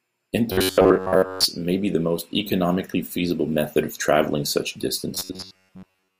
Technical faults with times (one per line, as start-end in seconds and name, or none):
0.52-1.45 robotic sound from repeated short buffers
5.15-6.19 robotic sound from repeated short buffers